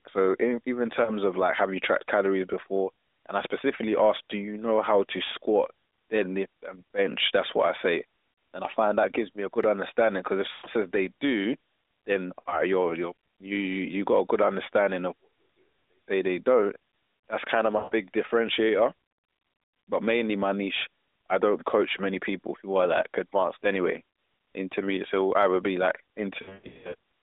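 Lost AMR speech frames cause dropouts at 1.04–1.10 s, 10.52–10.67 s, 12.40–12.62 s and 17.78–17.95 s, with a scattered cluster from 26.42 to 26.95 s. Radio errors corrupted frames, so the decoder extrapolated from the last good pitch and spectral shape with falling gain. The first event is a brief dip, consistent with one 20 ms frame. The longer ones smear into a drawn-out tone fading toward silence before the narrowband AMR speech returns weak and rough.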